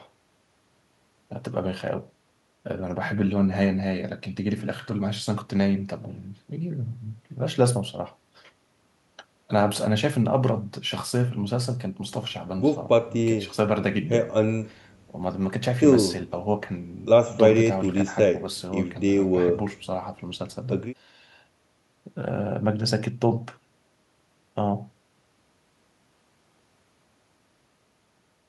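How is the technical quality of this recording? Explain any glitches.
No audible technical faults turn up anywhere in the speech recording, so there are no glitches to explain.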